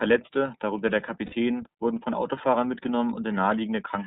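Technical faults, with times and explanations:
Throughout: iLBC codec. The speech is confined to the narrowband range, with nothing above 4 kHz, and the coding damage is plainly audible as a rough, slightly synthetic edge. The grain fits iLBC at around 13 kbps with 30 ms frames. Unlike AMR or G.729, which carry state from frame to frame, each block here is coded on its own.
1.26–1.35 s: lost iLBC frames. Right after "darunter der", about 60 ms of audio, roughly two 30 ms frames, goes missing. The decoder fills the gap by repeating the last pitch cycle blended with noise, so it sounds like a held, faintly buzzy vowel rather than silence or a click. Because iLBC frames stand alone, clean speech resumes almost immediately at "wurden von", without the lingering distortion that a predictive codec shows after a loss.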